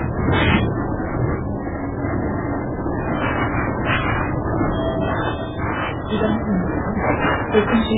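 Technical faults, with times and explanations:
Throughout, MP3 compression: the audio sounds dull, watery and swirly, with nothing above 3.8 kHz and smeared attacks. Heavy damage of this kind is likely from MP3 encoding at a very low bitrate, which fits about 8 kbps. Starved of bits, the encoder cuts all treble at a fixed frequency and drops weak frequency lines that flicker on and off from frame to frame, which makes the surface shimmer unsteadily.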